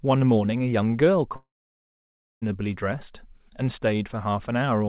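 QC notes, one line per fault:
1.36–2.44 s, long network dropout: sound breaks into a short fading buzz, then about 0.95 s of near-silence, and resumes with roughly 1.06 s lost, likely from dropped packets. The waveform shows a brief decaying tail, then a flat line. The spectrogram shows a smeared streak below 4 kHz, then a blank column.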